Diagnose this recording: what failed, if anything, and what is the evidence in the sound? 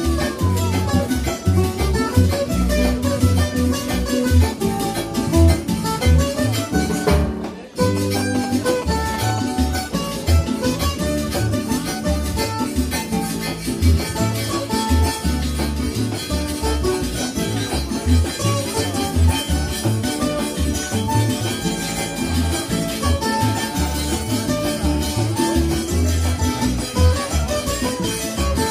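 GSM signalling bursts got into the analogue wiring: a galloping dit-dit-dit of short 217 Hz buzzes from 7.97 to 9.40 s, about 10 dB under the audio, from a nearby phone's RF being rectified.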